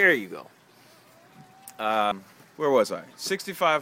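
A short stretch of audio jumps forward at 2.12 s, where compressed frames were skipped. About two frames never reach the output, so roughly a fifth of a second of material is lost, which fits a frame length near 93 ms. No silent gap appears, which rules out a dropout.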